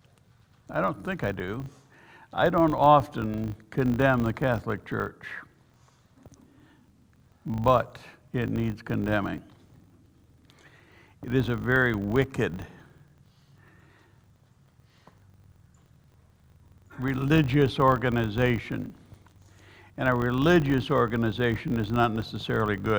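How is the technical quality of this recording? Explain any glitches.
A steady 50 Hz buzz runs through the whole recording, rising and falling with the level of the sound. This is a filter restarted on every block: it loses its memory at each boundary and starts from silence, leaving a small transient every 20 ms, which fuses into the buzz.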